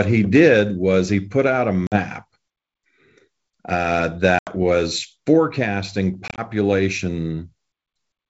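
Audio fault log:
1.87 to 6.42 s, packet loss on an ADPCM call: Three hard-edged gaps. The first is at 1.87 to 1.98 s, just after "he put out a", with about 50 ms missing. The second is at 4.39 to 4.56 s, just before "was forecasting", with 80 ms missing. The third is at 6.28 to 6.42 s, just after "was forecasting", with 70 ms missing. That last one is broken into short drops over 100 ms, none longer than 20 ms. The gaps fit roughly five to seven lost packets each. The missing audio is replaced by silence. The decoder's predictor and step size then no longer match the sender's, so the sound returns slightly distorted. It settles within tens of milliseconds. Between the gaps, the G.722 wideband coding carries clear speech.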